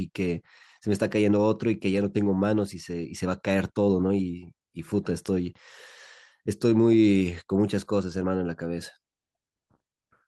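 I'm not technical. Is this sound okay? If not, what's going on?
No, not quite. The speech has a small, steady timing problem from start to finish.

The first fault is clock drift between sender and receiver. The machine that sent the speech keeps time slightly faster than the one playing it back, by about 5 percent. So audio arrives a little quicker than it can be played out. The extra keeps piling up in the waiting area that smooths playback. This goes on for the whole clip.

The second fault is the repeated timing corrections this causes. From 0.09 s to 10.27 s, the receiver keeps trimming tiny slices of speech to catch up. The sound ends up running at about 105 percent of its proper pace. The trims are small and unevenly spaced. You may hear them as faint hiccups, or as a rhythm that feels slightly rushed and unsteady.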